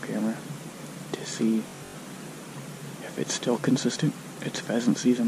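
From 1.68 to 1.95 s the sound breaks into a rapid machine-gun stutter, its longest run lasting 85 ms. This is Bluetooth stutter: 192 ms of audio went missing across 256 ms, and the receiver looped its last short slice until data resumed further along.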